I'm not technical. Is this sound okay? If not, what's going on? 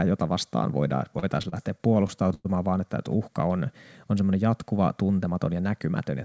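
No. From 0.98 to 2.47 s, just after "jota vastaan" and before "vaan että että uhka", the speech catches and drags in ten small hiccups, the longest about a tenth of a second. These are repeated stalls (stutter): the internet call's audio arrived late, so the receiver stretched the last sound to fill each wait. Nothing was lost.

Then from 5.24 to 5.55 s, after "on on semmoinen jatkuva", the speech briefly sounds rushed, about 15% faster at the same pitch. This is a jitter buffer speed-up: the receiver had built up too much waiting audio and trimmed away roughly a twentieth of a second to catch up. The call connection itself also leaves the sound a little dull, with nothing above 8 kHz.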